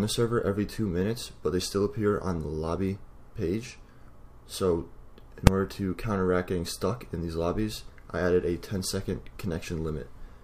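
At 5.47 s there is invalid numbers at full scale. A calculation failed and pinned the output to its limit for about 2.9 ms, fitting a 128-sample block. It is heard as one sharp bang.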